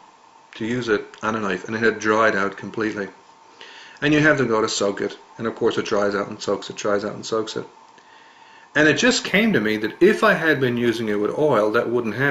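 From 9.27 s to the end, the audio shows imaging from linear upsampling. Straight-line interpolation between samples, which fits a conversion from 16 kHz up to 44.1 kHz, is a weak anti-imaging filter. The band just below 8 kHz loses brightness, and a mirrored copy of the spectrum between 8 and 16 kHz remains, around 35 dB below the signal. It comes through as a faint metallic shimmer riding on the high-frequency content.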